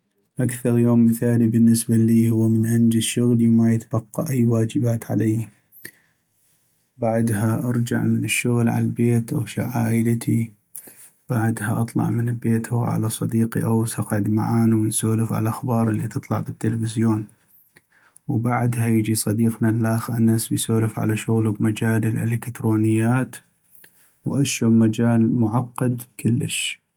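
No technical faults can be heard anywhere in this speech recording. Nothing in the sound stands out as a problem at any point in the clip.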